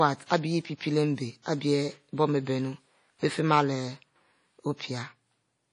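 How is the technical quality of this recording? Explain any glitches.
The technical quality is poor, with audible coding damage throughout the speech. The damage is likely WMA compression. Its ringing, washy texture and hiss that swells and fades with the speech fit a low bitrate near 32 kbps. A long-block transform encoder smears quantisation noise over tens of milliseconds and discards weak components. A spectrogram shows a hard ceiling at about 10.1 kHz, with patchy, holed detail below it.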